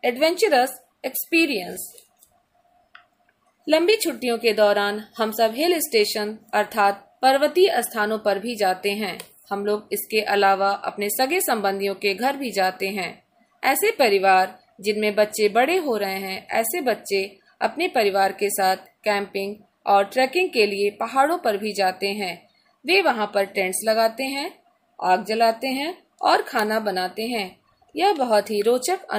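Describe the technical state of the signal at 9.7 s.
At 9.7 s the signal runs cleanly, with no dropout, distortion, glitch or other technical fault audible at that point.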